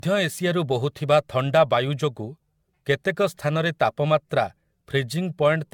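From start to finish the speech carries generation loss: a swirly, hollow smear with softened consonant attacks, worse than a single encode at this quality would give. It likely comes from the audio being decoded and re-encoded about seven times with AAC-LC, at a rate that points to 96 kbit/s. Each pass quantises on a shifted frame grid, so errors pile up. A spectrogram shows nothing above 17 kHz and smeared onsets.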